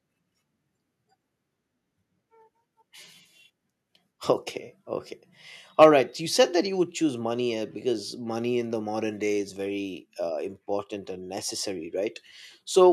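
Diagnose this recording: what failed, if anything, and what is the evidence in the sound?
Between 5.81 and 5.87 s the loudest speech peaks turn harsh and crackly, with their tops flattened and about a tenth of the samples cut off at the converter's limit. That's likely microphone overload at the converter, with peaks pushing roughly 4 dB past its limit.

Right in the middle of that distortion, at 5.84 s, speech and background drop together by about 3 dB, then fall another 2 dB or so at 6.84 s. That's the microphone volume stepped down, likely by the call processing trimming input gain after the clipping.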